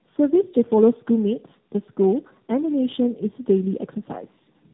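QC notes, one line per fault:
Throughout: tandem speech coding. The speech is rough, muffled and warbly, with nothing above 3.8 kHz. Each border re-decodes and re-encodes already degraded audio, so artefacts stack. This fits three speech codecs in a row, probably ending with AMR-NB.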